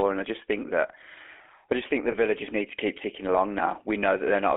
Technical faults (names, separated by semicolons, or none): GSM full-rate codec; lost GSM frames